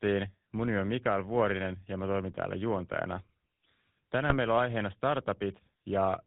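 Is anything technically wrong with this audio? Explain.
Yes, there are two problems. GSM full-rate codec damage runs throughout: the vocal-tract model driven by sparse regular pulses, consistent with 13 kbps, leaves the speech buzzy and gravelly, with nothing above 4 kHz. GSM bit errors strike at 4.30 to 4.35 s, where corrupted filter, pitch or gain values across what sounds like two frames produce a brief squawk and gargle.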